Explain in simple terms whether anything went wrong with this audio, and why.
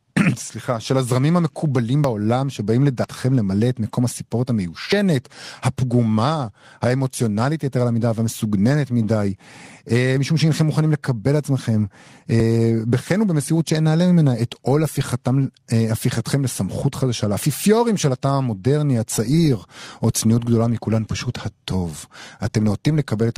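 Small jumps in the speech at 2.04, 3.04 and 16.32 s are likely a dropped buffer (overrun). Each time, a few tens of milliseconds went missing and the ends were joined.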